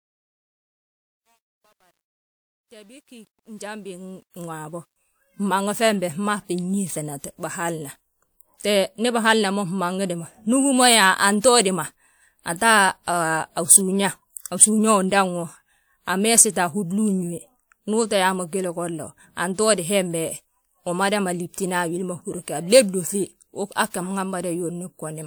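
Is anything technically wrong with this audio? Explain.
Yes. From 0.0 to 4.96 s there is truncation distortion on a fade: the fade was computed without dither at a resolution that fits about 10 bits, so the quiet speech turns gritty and stepped, worst up to 3.89 s.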